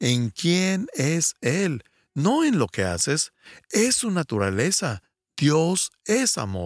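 No technical faults can be heard in this recording.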